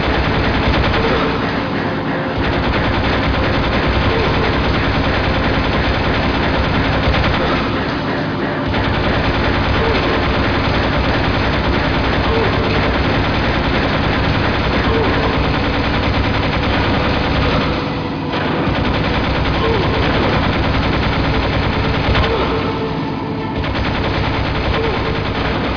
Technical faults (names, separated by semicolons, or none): none